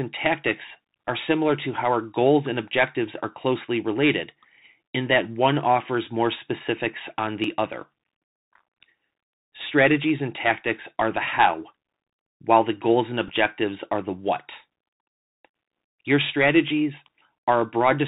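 It's a speech recording that's been squeezed through a Bluetooth CVSD headset codec the whole way. Everything above 4 kHz is gone, s sounds come out scratchy, and a grainy hiss sits under the voice. At 7.44 s, right after "offers more specifics on", and again at 14.87 s, after "are the what", there's a little jump forward, about 10 ms missing each time, most likely a dropped buffer from an overrun. Between 13.28 and 13.30 s, just after "while the goals and", a Bluetooth headset packet repeat replays stale data for about 7.5 ms, which fits a couple of lost packets and gives a brief buzzy blip.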